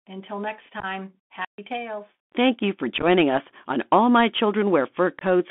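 The whole speech clip runs through a Bluetooth CVSD headset codec. Each sample becomes one bit saying up or down, with an adaptive step, which fits a 64 kbps link. The band sits between 200 Hz and 3.5 kHz. The damage is plain. A granular hiss lies under the speech. S sounds turn scratchy. Loud, bright moments outrun the step size and distort.

From 0.80 to 0.85 s, just after "until next", comes unconcealed Bluetooth headset packet loss. About 26 ms of audio is missing, scattered over 30 ms. The longest hole is 15 ms. A handful of short voice packets never arrived, and nothing filled the gaps. The result is a brief chopped crackle with abrupt edges.

From 1.42 to 1.58 s there is an intermittent contact. A loose plug or cable opens for about 135 ms. The sound drops out. Crackle marks both edges, and faint hiss fills the gap.

The packet loss returns from 2.98 to 3.04 s, between "you for" and "us on". 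Again about 26 ms is lost, this time spread over 45 ms, with runs of up to 11 ms. The speech sounds rough and chopped there. After the holes it comes back quieter for a moment, as a CVSD link does.

A last loss falls at 5.19 to 5.23 s. About 22.5 ms vanishes in a short burst of crackle.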